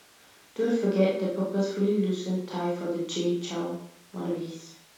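No technical faults can be heard anywhere in this speech recording.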